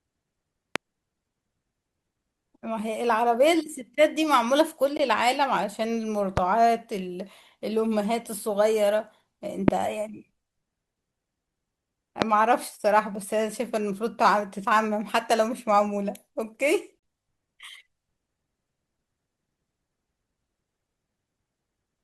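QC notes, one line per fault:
0.76 to 12.24 s, loud pop: four single sharp pops in the speech, at 0.76, 6.37, 9.68 and 12.22 s, each about 23 ms long and peaking roughly 15 to 25 dB above the speech. Each is likely a brief voltage pulse, from a plug, switch, static or driver glitch, riding on top while the speech continues underneath.
4.97 and 16.99 s, gap between stream segments: two hard-edged silent holes, about 19 ms and 35 ms long. Mismatched time stamps between consecutive segments leave a gap that the player fills with silence, which fits 6-second segments. No speech is lost, only delayed.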